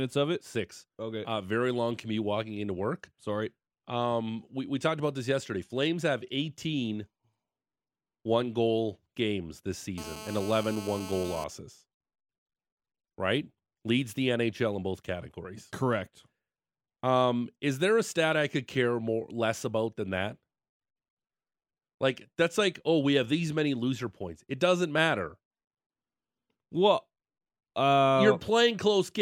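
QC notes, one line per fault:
9.98–11.44 s, GSM phone buzz: after "one goal games this", a steady, raspy 217 Hz buzz about 14 dB under the speech, from a nearby phone's call bursts getting rectified.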